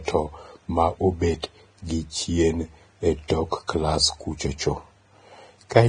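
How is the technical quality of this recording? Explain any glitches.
Technical quality is poor, with heavy lossy-codec damage throughout and three small pre-echo glitches on sharp onsets.

The whole recording sounds hissy and grainy, with nothing above about 9.7 kHz. The consonants smear and the tones have a rough edge. That's most likely Vorbis compression at a low setting, around 23 kbps by the sound of it. At that rate the encoder cuts the top end and quantises what's left of the treble so coarsely that the fine detail turns into noise.

Pre-echo shows up at 1.42 s, 3.28 s and 3.68 s. Each time, a short hiss of about 15 to 19 ms comes just before a sharp attack, and the attack itself sounds soft. The codec spreads its quantisation noise across a whole transform block. So when a transient lands late in a block, the noise that was budgeted for the loud part leaks into the quiet moment before it.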